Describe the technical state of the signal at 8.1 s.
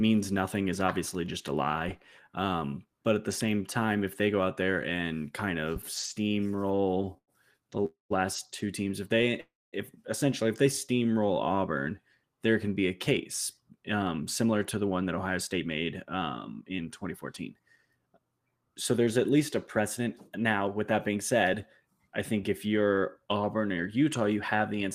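At 8.1 s the speech is in the final moments of a call audio freeze running from 7.85 to 8.12 s, likely caused by packets stalling until the jitter buffer ran dry. The last sound is stretched into a fading buzz, then about 140 ms of silence, and "two teams if" resumes roughly 250 ms late. Unlike a packet-loss dropout, no speech is missing: a gap is inserted and the audio continues exactly where it paused.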